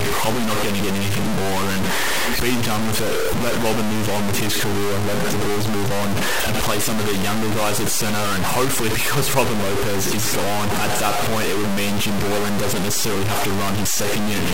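Throughout the speech, harsh grainy distortion follows every sound, roughly as loud as the speech itself. This is likely low bit depth without dither, fitting 3-bit truncation.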